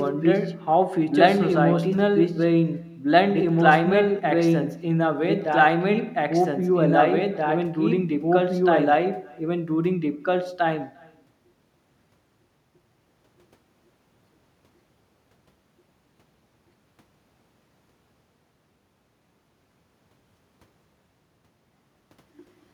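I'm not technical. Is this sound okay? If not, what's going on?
No, there are two problems, and both run through the whole clip.

The first is a doubled audio track. The same speech is heard twice, with the second copy about two seconds behind the first. The copy is about as loud as the original, so two passages of speech overlap. The copy sounds just as clean as the original, with no added room sound. The likely cause is the sound being recorded a second time through a slower route, or an edit that left two copies out of step.

The second is echo with no canceller. Every sound the talker makes comes back about a third of a second later. This returning copy is much quieter and thinner than the original. It happens when the other person's loudspeaker plays the call, their microphone picks it up, and nothing removes it before it travels back.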